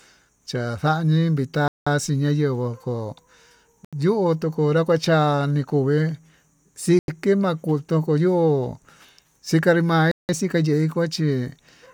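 At 1.68, 3.85, 6.99 and 10.11 s the speech drops to dead silence for about 190, 80, 90 and 180 ms, then carries on. That's most likely a Bluetooth stall: the headphones' buffer runs dry while delayed packets get resent.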